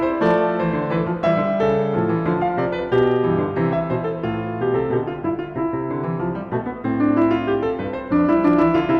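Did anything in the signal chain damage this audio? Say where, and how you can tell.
Yes. This music clip has hard clipping at 0.25–0.38 s, 1.27–2.30 s, 2.93–3.16 s, 7.04–7.35 s and 8.16–8.96 s. The loudest passages were driven past full scale at a gain or converter stage, by about 4, 1, 3, 1 and 3 dB respectively. The peaks were sliced flat. Those flat tops add high harmonics. That gives a gritty crackle on the loud moments, harshest in the first burst.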